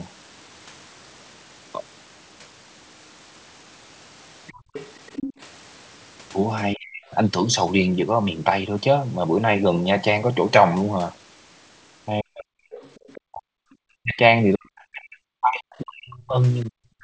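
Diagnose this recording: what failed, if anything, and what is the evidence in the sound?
Call processing, echo cancellation: the canceller likely left residual loudspeaker echo in the microphone signal. A second voice from the other side of the call leaks through from 4.47 to 5.33 s at about 15 dB below the talker, and again from 12.72 to 13.76 s at about 25 dB below.

Call processing, echo canceller gating: while the loudspeaker was active, the canceller clamped the microphone gain hard. The room background drops out from 4.56 to 4.73 s, about 150 ms, falling by about 33 dB before recovering when the canceller releases.

Call processing, speech suppressed in double talk: with both sides talking, the canceller likely mistook the near talker for echo and attenuated everything. The talker's voice sinks by roughly 40 dB for just under half a second at 6.75–7.14 s and 12.22–12.61 s, then from 13.23 s to the end.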